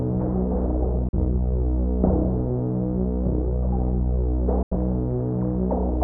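The sound snaps to silence at 1.09 to 1.16 s and 4.63 to 4.75 s, a digital broadcast dropout where the receiver muted over roughly one, then two, failed frames.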